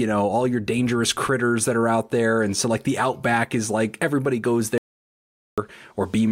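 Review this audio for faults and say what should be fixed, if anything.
The input feed was most likely interrupted by a loose connection, a dropped link or an accidental mute while the recorder kept writing silence. The result is an audio dropout to silence from 4.78 to 5.58 s. The speech cuts off abruptly and leaves about 0.8 s of silence with no room tone underneath. It then resumes mid-flow, and whatever was said during that gap is lost and cannot be recovered from this file. To prevent it, secure the input cabling and link, and monitor input levels live so a lost signal is caught and re-recorded straight away.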